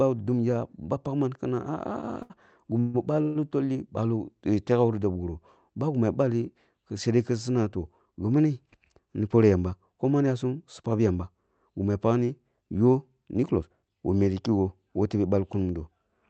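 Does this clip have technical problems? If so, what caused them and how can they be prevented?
Yes. At 2.22 to 2.32 s there is a short stall from a late packet. The jitter buffer ran dry, so the last sound is held for 74 ms and then carries on from the same place. Nothing is lost. A larger or adaptive jitter buffer would prevent this.

Two call audio freezes follow, at 2.80 to 2.96 s and at 3.22 to 3.37 s. Each is filled for 141 ms and 132 ms with a fading buzz or hiss rather than silence. The likely cause is packets held up in transit. Steadier network routing or more buffering would prevent them.

A jitter buffer speed-up runs from 8.75 to 11.90 s at 108 percent, trimming roughly 0.3 s. A second one runs from 13.35 to 13.84 s at 107 percent, trimming about 40 ms. The pitch stays the same, but the speech sounds hurried. This comes from the receiver dropping tiny pitch-period slices to shrink an overfull buffer. 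Smoother packet delivery would prevent it.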